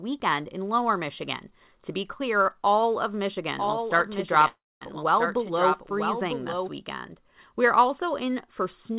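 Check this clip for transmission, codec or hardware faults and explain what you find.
Two faults turn up here: a doubled track in the middle of the speech, and a short call freeze sitting inside it. The whole thing has come through a narrowband call path, with nothing above 4 kHz, which fits G.711 A-law at 64 kbps.

The doubled audio track runs from 3.58 s to 6.69 s, starting just after "be clear all of". A second full-band copy of the speech trails the original by roughly a second, around 5 dB quieter, so you hear the talker overlapping themselves. There's no room tail on it, and it switches on and off abruptly at those points. The likely cause is the audio being picked up a second time through a slower path, or an edit leaving two copies out of step.

The call audio freeze is at 4.48 s to 4.83 s. For about a third of a second in all, the last bit of sound gets stretched into a fading buzz or hiss, ending in silence for around 0.22 s of that, before the speech picks up exactly where it left off. 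Nothing is lost. Everything after just lands about 0.33 s later. The likely cause is packets held up in transit, so the jitter buffer ran dry and the receiver filled the gap until they arrived.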